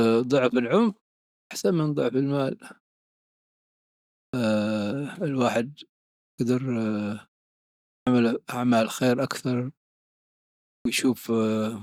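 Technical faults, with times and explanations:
1.39, 4.21, 6.27, 7.94 and 10.74 s: clipped start after a pause. After silences of 0.45 to 1.49 s, the output device wakes late and swallows 113 to 127 ms, as in "من ضعف" and "أعمال خير أكثر". The waveform jumps straight to speech level, and the spectrogram shows a hard vertical edge with no onset.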